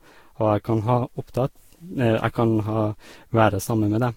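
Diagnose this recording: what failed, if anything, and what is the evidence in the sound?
Generation loss at the codec stage, present throughout the speech. The sound is swirly, smeared and hollow, consonant attacks blur, and nothing remains above 16.7 kHz. This likely comes from about five passes through a lossy codec around 64 kbit/s. Each re-quantisation compounds noise and spectral holes.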